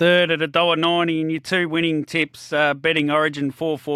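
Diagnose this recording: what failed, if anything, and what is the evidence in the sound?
A block of digital silence at 1.38 s, in the speech, points to the driver or buffer stage. The gap lasts about 0.73 ms, which fits a 32-sample block that was never filled with audio before it was sent out. The waveform drops out abruptly and jumps back with no fade, so the two hard edges merge into a single short tick rather than an audible hole.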